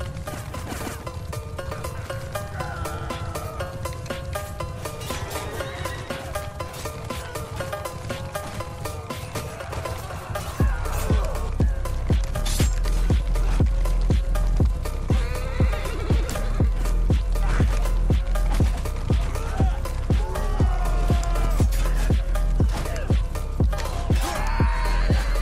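There are no technical faults to describe in this clip.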